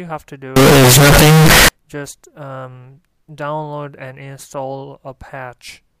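From 0.56 s to 1.68 s the audio turns abruptly into a very loud, harsh, buzzing block, with the waveform driven to a near-square shape sitting at an almost fixed, high level, and low-level background noise jumping up to match the main sound. This is a float read as integer fault, likely caused by 32-bit float samples being interpreted as 32-bit integers, so each sample's sign and exponent bits set its level instead of its actual amplitude.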